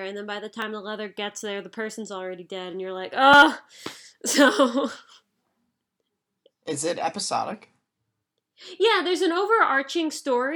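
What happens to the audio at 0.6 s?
At 0.62 s a tiny stretch of samples, about 0.41 ms, was replaced by zeros: a block of digital silence. The speech drops instantly to nothing and snaps straight back with no fade, so the two hard edges merge into a single brief tick.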